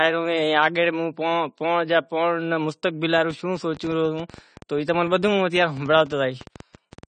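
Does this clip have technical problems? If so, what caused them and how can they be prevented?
Yes. The speech was likely squeezed through low-bitrate AAC compression, with a dull, band-limited sound and nothing above 9 kHz that fits roughly 32 kbps. Too few bits force the encoder to drop high frequencies and quantise coarsely, leaving plainly audible smearing and fizz throughout. Encoding at a higher bitrate avoids this.

From 3.18 s to 7.04 s a train of clicks runs at about 9.3 per second, unevenly spaced, some forty in all, peaking about as loud as the speech. Electrical interference or a faulty connection or power supply is the likely source, repeatedly injecting similar pulses. Shielding cables and securing connections and power supplies prevents it.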